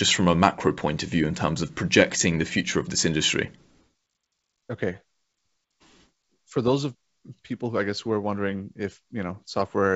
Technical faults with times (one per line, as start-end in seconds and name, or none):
none